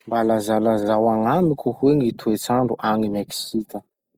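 Grainy, rough speech runs from start to finish, with a noisy texture, though the top end still reaches about 20.4 kHz. Likely cause: Opus compression in CELT mode at a rate near 24 kbps, refilling fine detail with noise.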